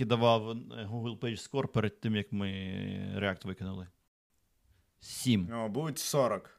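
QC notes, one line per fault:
4.08–4.30 s, playback stall: the speech cuts out mid-flow into about 0.22 s of silence, then carries on. This is likely the player running short of data or being blocked. A continuous stretch of silence sets it apart from a brief dropout click.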